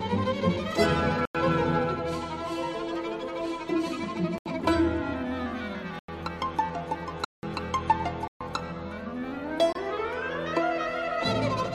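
Six abrupt dropouts cut the sound to dead silence: 1.25–1.35 s, 4.38–4.46 s, 5.99–6.08 s, 7.25–7.43 s, 8.28–8.41 s and 9.73–9.75 s. These are blocks of digital silence, likely where the output buffer went unfilled; several gap lengths fit 4096- or 8192-sample buffers.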